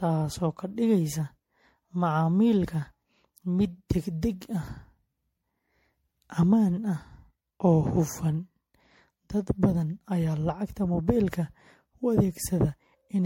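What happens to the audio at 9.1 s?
Generation loss runs through the whole clip, likely from about five MP3 re-encodes near 64 kbit/s, so at 9.1 s the speech sounds swirly and hollow, with blurred attacks and nothing above 16.5 kHz.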